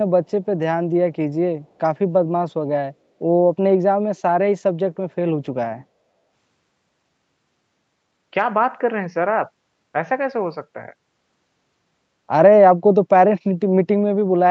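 At 1.64 to 1.68 s, the echo canceller on a far end playing the call over a loudspeaker likely let a small piece of its microphone pickup slip through and return down the line. This echo leak sounds like a brief, very faint scrap of the speech repeating about 0.4 s after the original, sitting far below the main speech. Like the rest of the speech, the scrap stops at 8 kHz.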